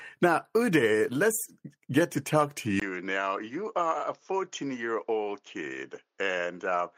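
At 2.80 s, just after "get to talk to", the speech cuts out for about 20 ms and comes back changed for the rest of the clip. Nothing is left above about 7.2 kHz, so the sound turns duller, the level falls by roughly 5 dB, and a new noise floor appears, roughly 50 dB below the speech. This is most likely an input switched to a poorer device: the recording moved mid-take to a narrower-band microphone with its own tone and noise.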